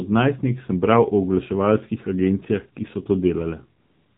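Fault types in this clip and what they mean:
AMR narrowband mobile codec: The speech has passed through the AMR-NB mobile codec, which samples at 8 kHz and rebuilds the voice from a vocal-tract filter excited by sparse pulses. Nothing above 4 kHz survives, so the sound is narrow and muffled, and the coding damage is plainly audible as a buzzy, synthetic edge on the voice throughout. That level of degradation fits one of the lower modes, around 7.4 kbps.
AMR comfort noise: From 3.80 s to the end of the clip, about 385 ms, the sender stopped transmitting speech frames after judging the talker silent, and the receiver filled the gap with generated noise built from a rough level and spectrum estimate. The real background gives way to a smooth, even hiss that switches in abruptly. Any quiet trailing sound or ambient detail in that stretch is replaced rather than reproduced.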